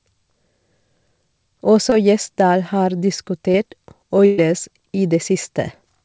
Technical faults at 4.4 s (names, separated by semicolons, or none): burst of packet loss